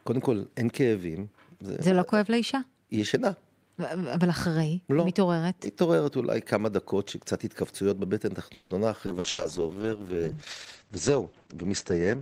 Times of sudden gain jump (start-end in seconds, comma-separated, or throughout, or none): none